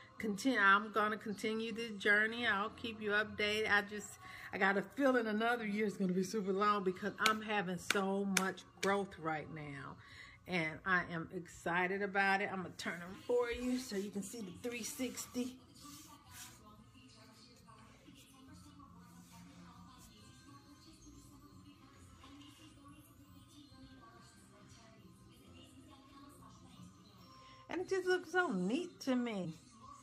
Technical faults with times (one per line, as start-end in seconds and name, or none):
13.10-13.14 compressed frames skipped
29.40-29.46 compressed frames skipped